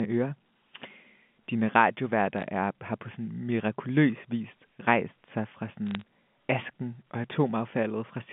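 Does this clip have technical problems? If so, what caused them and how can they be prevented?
Yes: bit errors on a digital phone line cause two bursts of sharp crackle, at 2.38 to 2.43 s just before "er har på" and at 5.87 to 6.01 s between "vis rejst sig fra" and "asken og". Flipped bits on the G.711 A-law line, at a rate of roughly 0.2 percent, each corrupt a single sample, and hits on sign or high-order bits produce the ticks. Error-checked transmission or a cleaner line link would prevent them.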